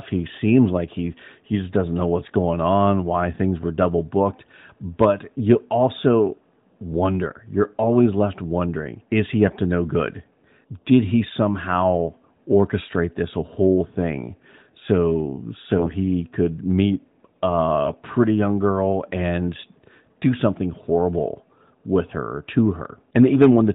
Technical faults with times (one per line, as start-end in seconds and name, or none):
9.48-9.57 AMR bit errors
15.78-15.94 AMR bit errors
17.85-17.95 AMR bit errors